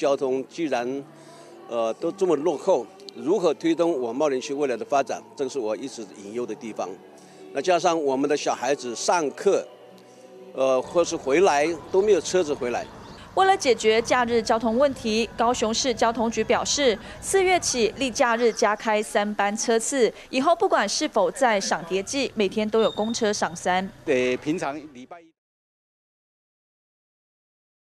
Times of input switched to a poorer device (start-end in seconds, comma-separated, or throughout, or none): none